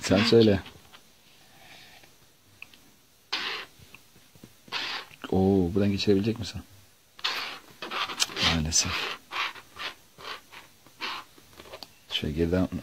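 Clock slip clicks run through nearly the whole clip, from 0.11 s to 12.78 s: a soft, steady rattle of ticks about twenty times a second. That fits single-sample slips from two unsynchronised clocks, likely drifting apart by around 400 ppm.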